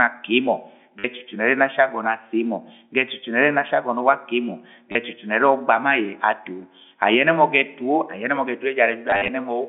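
Telephone-band speech, G.711 mu-law at 64 kbps, with packet loss with last packet repeated at 0.99–1.04 s, 4.92–4.95 s, and scattered across 9.1–9.28 s (110 ms lost, longest run 50 ms). The replayed chunks buzz briefly, which fits 10 ms packets.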